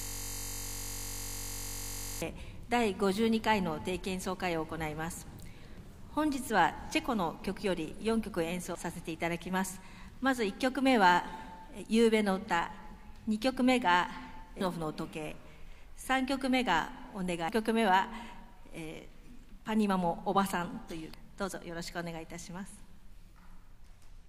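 Right from the top, the audio is caught in a system hang loop that's already under way when the clip starts and runs until about 2.22 s. The machine or its driver stalled while the sound hardware kept replaying the same 21.33 ms stretch of its ring buffer. A 21.33 ms loop fits a 1024-sample buffer. Repeating at 46.9 Hz, it doesn't come across as a stutter but as a steady buzz until things unfreeze. After that there are five short blips from damaged data in a compressed stream: 5.78 to 5.81 s, 8.75 to 8.78 s, and then shorter ones at 14.61, 17.49 and 21.14 s. At each of those spots the bytes coming in were corrupted, so the decoder misread the frame, lost sync and had to hunt for the next valid header. That's why you hear a brief glitch at each one.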